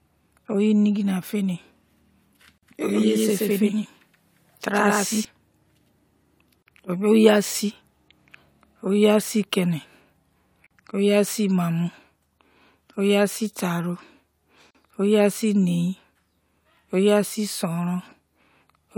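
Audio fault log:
2.58, 6.63, 10.67, 14.71 s, gap at a join of encoded pieces: 40–46 ms silences every 4.0 s, before "oyi asi" and "oyi asi nein", from untrimmed encoder delay and padding.
2.91–5.25 s, doubled audio track: speech carries an equally loud, dry copy about 150 ms behind that cuts in and out abruptly, likely from a second, slower capture path.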